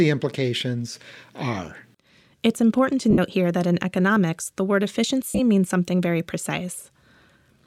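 Bluetooth LE Audio frames were dropped twice, at 3.10 to 3.19 s (60 ms lost across 75 ms) and at 5.27 to 5.40 s (97.5 ms across 120 ms), with the longest run around 50 ms. The LC3 decoder patched them with the last spectrum and scrambled signs, smearing the speech into noise that fades.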